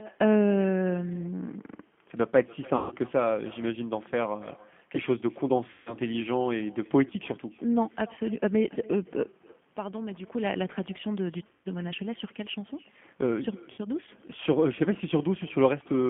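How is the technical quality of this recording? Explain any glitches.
Pretty rough, honestly: it's narrowband phone-call speech with a trailing echo and four concealed dropouts.

Throughout there's echo with no canceller: the far end's speaker leaks back into its mic, so every phrase returns about a third of a second later, roughly 24 dB quieter and thinner.

The G.729 codec damage is plainly audible. The band is squeezed to about 150 Hz to 3.4 kHz, which fits 8 kbit/s G.729A, and the model-based rebuild makes everything sound slightly rough and synthetic.

VoIP packet loss concealed by the speech codec hits at 2.76 to 2.95 s, 5.71 to 5.96 s, 11.47 to 11.68 s and 13.72 to 13.80 s. About 150, 150, 180 and 60 ms went missing, and the decoder stretched its last sound into a buzzy tone or coloured noise that fades before recovering.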